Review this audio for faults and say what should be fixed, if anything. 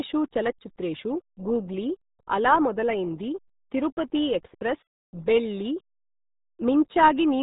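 RealAudio 14.4 codec damage runs through the whole speech clip. Nothing above 3.8 kHz survives, and the heavy low-rate coding leaves the speech muffled and gargly, which fits an 8 kbit/s dial-up-era speech codec discarding most spectral detail. Prevent it by sourcing the original or a higher-bitrate master instead of a RealAudio 1 transcode.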